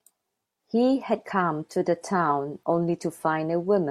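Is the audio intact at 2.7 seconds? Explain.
Yes, the speech at 2.7 seconds is intact, with no dropout, click, distortion or other fault at that moment.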